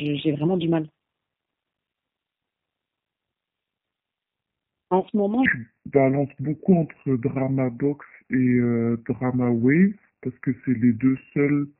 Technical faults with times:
0.00-11.80 G.729 codec
5.00-5.07 VoIP packet loss concealed by the speech codec
5.46-11.80 section at the wrong speed

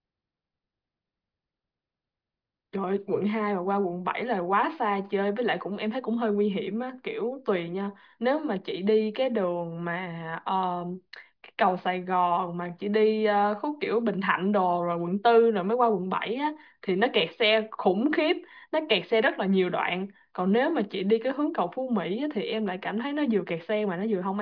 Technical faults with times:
none

